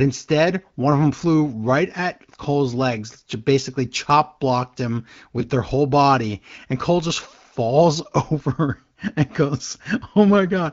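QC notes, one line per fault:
The speech has the band-limited character of the AMR wideband (HD Voice) codec working normally, with detail up to about 7 kHz and only the light coding texture expected at a rate around 15.85 kbit/s.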